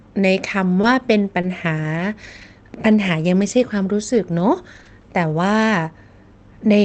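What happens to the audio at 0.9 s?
The 0.9 s mark falls inside a stretch of scattered short gaps running from 0.81 to 5.05 s. About five brief packet losses, none much over 20 ms, are each patched by extending the preceding sound, leaving small ticks, smears or hiccups.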